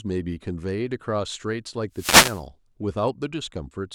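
From 1.92 to 2.44 s, a wireless microphone noise hit: the analogue FM radio link fades as reflected signals cancel, so receiver hiss swells into a half-second swish of static over the speech. Unlike a digital dropout, it fills with noise rather than going silent.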